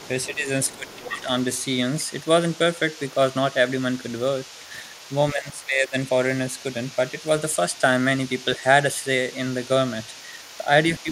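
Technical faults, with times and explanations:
Throughout: other side's voice leaking through. A loudspeaker on the talker's end was playing the far side, and the echo canceller likely failed to subtract all of that sound from the microphone pickup. The remainder rides under the speech for the whole clip as a faint second voice, roughly 25 dB below the talker, so it is heard as a quiet murmur behind the main speech.
0.27–1.28 s, 5.33–5.94 s, 8.58–8.63 s and 11.03–11.09 s: speech suppressed in double talk. When both sides spoke together, the echo canceller likely could not tell the talker from the loudspeaker echo and turned everything down. The talker's level dips in these spots, by around 15 dB in the first, about 10 dB in the second and last, and only slightly in the brief third. The two longer stretches sound like the voice sinking away, and the short ones like quick dips.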